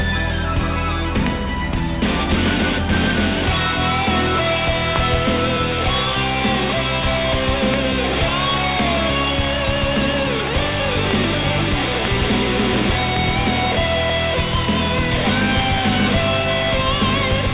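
Loud pops occur at 1.27, 4.96, 7.74, 11.11 and 13.17 s, each a single sharp hit, plus two in quick succession between 12.05 and 12.27 s. Each sits about 15 dB above the surrounding audio, which continues underneath. The likely cause is a voltage step or pulse from a plug, switch, static or driver glitch, shaped by the circuitry after it. The band-limited sound, with nothing above 4 kHz, fits a G.711 mu-law call path.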